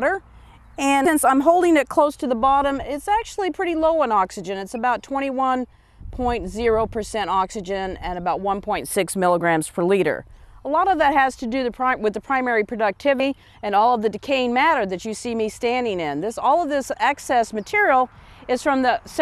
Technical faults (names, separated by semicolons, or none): compressed frames skipped